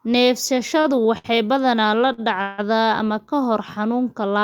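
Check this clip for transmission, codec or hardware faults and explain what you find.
The speech has two kinds of network fault: three brief stalls and one longer freeze.

Short stalls from a late packet occur at 0.81–0.86 s, 1.18–1.26 s and 2.13–2.20 s, lasting 32, 62 and 52 ms. Each time a packet missed its slot, the jitter buffer emptied and the receiver held the last sound until the packet arrived, so the speech drags briefly with a faint buzz or dip but loses nothing.

A call audio freeze runs from 2.42 to 2.60 s. The sound stops moving forward for 162 ms and a fading buzz or hiss fills the gap, never dropping to silence, before the speech resumes where it halted. The likely cause is packets held up in transit, draining the jitter buffer.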